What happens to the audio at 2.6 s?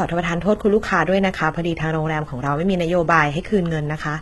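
HE-AAC compression, the likely cause, affects 2.6 s as it does the whole clip. The treble is rebuilt from copied lower bands and stops at 11.8 kHz, which fits a very low bitrate near 16 kbps. The s sounds come out gritty and metallic.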